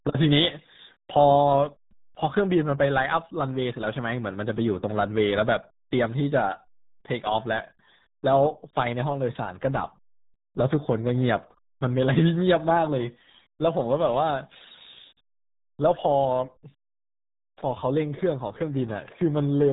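Speech with the RealAudio 14.4 codec damage throughout: nothing passes above 3.8 kHz, and heavy gargling, watery distortion smears every syllable. That warble, beyond mere muffling, separates it from a simple telephone-band filter, and fits a very low, roughly 8 kbit/s, dial-up-era encoding.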